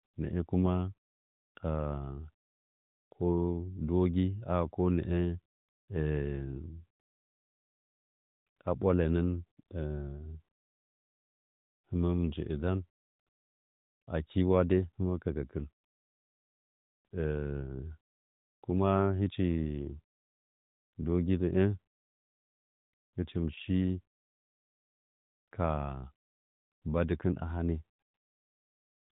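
No technical faults are audible.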